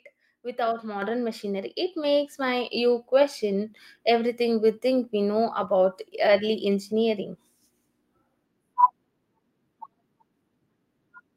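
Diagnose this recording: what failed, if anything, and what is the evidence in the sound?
Microphone volume stepped up at 1.02 s and again at 2.04 s, just before "my you question everything". Voice and background noise jump together, by about 6 dB and then about 4 dB. This is a call-processing fault: the software's gain control raised the device input volume in abrupt steps.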